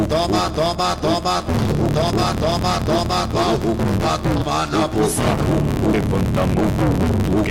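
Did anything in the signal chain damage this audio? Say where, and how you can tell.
Yes. A filter restarted on every block damaged it, at the buffer or block-processing stage. A steady buzz at about 93.8 Hz runs through the whole clip, from start to finish. Its loudness rises and falls with the sound itself. That pitch matches a regular block rate, which fits a 512-sample buffer. Each block's filter starts again from silence instead of carrying its state over, so every block boundary leaves a small transient, and those repeat into a buzz.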